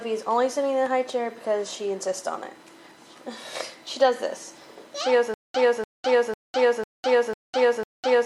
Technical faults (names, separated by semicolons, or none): USB whine; stutter with silent gaps